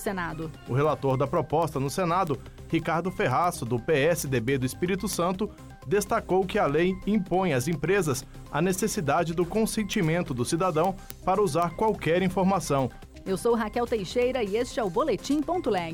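From 0.2 to 15.9 s there's a string of sharp, uneven word clock ticks, roughly every 0.15 s, as an unlocked receiver drifts a couple of hundred ppm and slips single samples.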